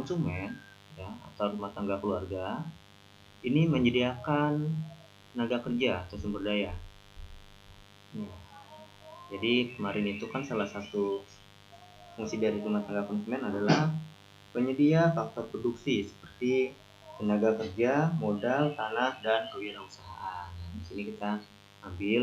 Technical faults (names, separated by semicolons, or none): mains buzz